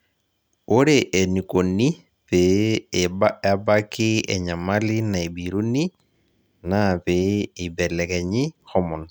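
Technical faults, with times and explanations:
No technical faults heard.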